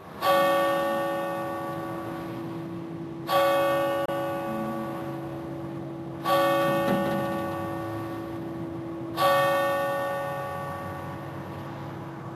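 A recording of sounds briefly cuts out with a quick 3 ms fade between 4.05 and 4.09 s, a digital broadcast dropout that muted the receiver, consistent with about 24 ms of audio from a single lost frame.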